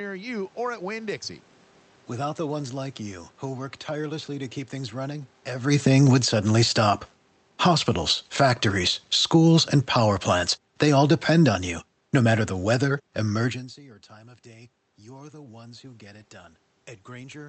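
It's a speech recording, and the automatic gain control is chasing the talker's level changes. Around 5.5 s the talker seems to come closer, and from 5.56 s the automatic gain falls, pulling the level down by about 15 dB over several seconds until about 13.67 s. The background sinks right along with the voice, which is the giveaway that it's the gain moving and not just the talker. Inside that stretch there's a short automatic gain rise from 6.26 to 7.2 s, adding about 5 dB, so you hear a brief swell of voice and room together before the downward drift carries on. Then around 13.5 s the talker seems to move back, and the input drops by about 24 dB. From 13.74 to 16.34 s the automatic gain rises by about 5 dB, a slow swell of voice and background together that only partly makes up for the drop, so the end still sounds quiet. The room noise is just part of the recording. The audio also went through an Opus call path, with the top end cut at about 8 kHz and the coding character consistent with a roughly 40 kbps stream.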